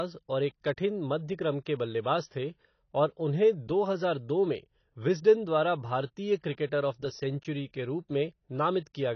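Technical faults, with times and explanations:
throughout AAC compression: likely a low-bitrate AAC-LC encode, consistent with about 24 kbps, removing everything above 6.6 kHz, so the speech sounds dull, smeared and warbly.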